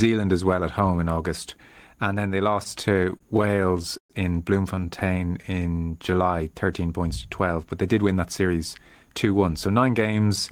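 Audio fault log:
2.63–4.12 s and 4.76–5.45 s, repeated stalls (stutter): Right after "then they" the speech catches 18 times in the first run, the longest hold about 121 ms, filling 22% of that stretch. The second run has 6 short catches of 12 ms at most. Packets arrived late, the jitter buffer ran dry, and the receiver stretched the last sound until data resumed, so nothing is lost but delivery drags. On a spectrogram, harmonics freeze into flat horizontal bands, and the longer holds thin out toward silence. In the waveform, identical cycles repeat.
4.86–6.11 s, jitter buffer slow-down: Overlapping the second stutter run, the speech plays at about 89% speed with pitch unchanged. Vowels sound drawn out. The buffer was low or had just raised its target delay, so the receiver rebuilt its reserve by repeating single pitch periods, adding 149 ms in total. The waveform shows duplicated periods joined seamlessly. 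On the spectrogram, syllables look stretched in time while harmonic spacing stays the same.
7.98–10.01 s, jitter buffer speed-up: The speech runs at about 108% speed at the same pitch and sounds hurried, losing around 150 ms overall. Too much audio had built up in the buffer, so the receiver cut the excess delay by removing short slices of one or a few pitch periods, again and again. On the spectrogram, syllables and gaps look compressed in time while harmonic spacing is unchanged. The waveform shows missing cycles at splice points.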